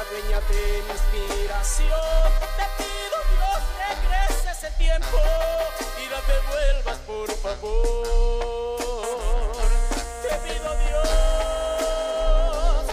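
No audible technical faults.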